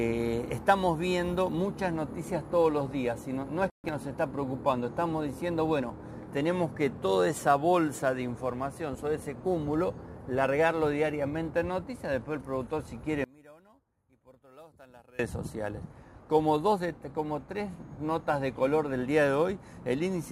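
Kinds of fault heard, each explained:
One channel inverted: From 13.24 to 15.19 s the sound drops by about 27 dB, likely because one stereo channel's polarity is reversed so shared content cancels when summed. Unlike a dropout, a faint remnant persists rather than true silence.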